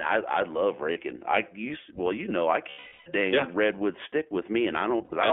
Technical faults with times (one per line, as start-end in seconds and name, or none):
0.00-5.33 iLBC codec
0.92-0.98 lost iLBC frames
2.70-3.08 lost iLBC frames
4.98-5.13 lost iLBC frames